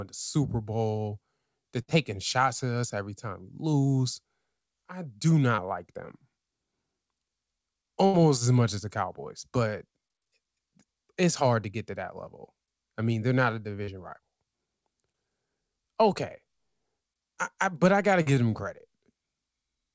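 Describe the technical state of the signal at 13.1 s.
At 13.1 s the signal is intact, with no fault present, only the normal band limit of the G.722 call path, which leaves nothing above 8 kHz.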